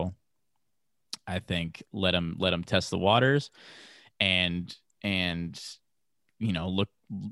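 Nothing stood out as a technical problem on listening to the recording.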